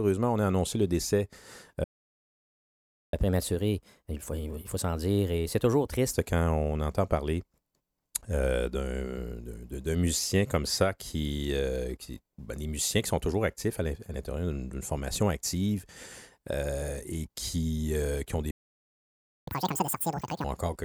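At 1.84 s the speech cuts out in a playback stall lasting 1.29 s, until 3.13 s, likely because the player's buffer ran dry or its thread was blocked. From 3.13 to 6.13 s a catch-up at higher speed follows: the backlog is resampled at 1.1x, so speech runs slightly fast and about a semitone and a half sharp before settling. A second stall silences output from 18.51 to 19.48 s, 0.96 s, likely from the same buffer starvation. Recovery from 19.48 to 20.44 s is far harsher, at 2.0x, with pitch raised by nearly an octave.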